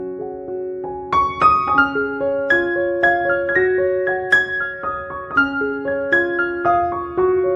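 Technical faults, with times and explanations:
No technical fault can be heard anywhere in the audio, and the signal stays continuous throughout.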